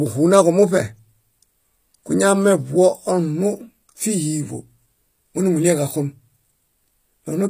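Across the whole speech clip the treble sounds synthetic: s sounds come out gritty and lispy, with a metallic sheen, and nothing is present above 15.5 kHz. This is likely HE-AAC compression at a low rate, fitting something near 24 kbps. The codec keeps only the lower spectrum and fills the top by copying lower bands upward under a rough envelope, so the rebuilt harmonics fail to line up with the real ones.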